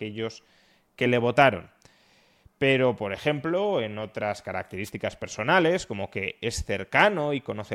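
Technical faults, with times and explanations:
4.85 to 4.90 s, wireless microphone noise hit: a brief swish of static cuts across the speech for about 55 ms and then clears. The radio link from the analogue FM microphone momentarily faded as reflected signals cancelled the direct one at the receiver. With too little carrier left to hold the FM signal, the receiver's own noise rose to the surface and masked the voice until the signal recovered.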